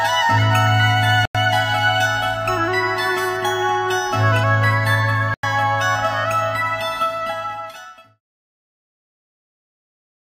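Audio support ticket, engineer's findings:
Block of digital silence at 1.25–1.35 s and 5.34–5.43 s. Each is about 93 ms of silence, cutting in and out with no fade. That fits a 4096-sample output buffer not filled in time. Unlike the editor-style fade-out ending at 8.21 s, no ramp.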